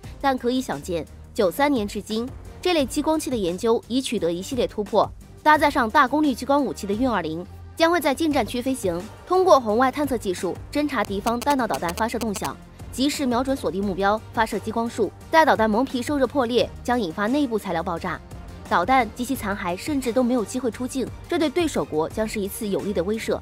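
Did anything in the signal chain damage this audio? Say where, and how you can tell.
Yes. From 11.05 to 12.47 s there are GSM signalling bursts, picked up in the analogue wiring. The interference is a galloping dit-dit-dit of short buzzes at 217 Hz, sitting only a few decibels below the wanted sound. A nearby 2G phone exchanging brief control bursts with the network radiates RF that an unshielded input or cable rectifies. The envelope of that RF lands in the audio band as pulsed buzz at the TDMA frame rate.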